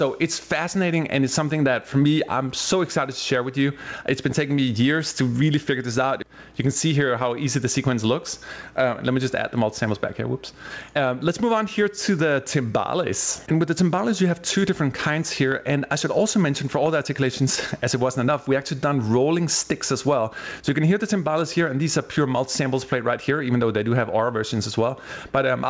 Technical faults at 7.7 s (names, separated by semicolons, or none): gain pumping